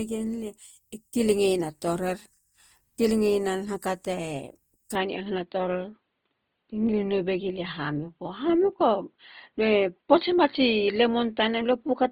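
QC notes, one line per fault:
throughout, Opus compression: the speech sounds grainy and rough, with tonal parts turned noisy. This is likely low-rate Opus in its music mode, near 24 kbps, filling starved bands with folded or noise content. A spectrogram shows full bandwidth to about 20.1 kHz, with smeared, speckled texture in the upper bands.
4.95–12.12 s, input switched to a poorer device: from 4.95 s to the end the sound turns dull and boxy, with no gap and roughly the same level. The likely cause is a change to a narrower-band microphone. The spectrogram shows content abruptly ending at 4.5 kHz, with a faint new noise floor far below the signal.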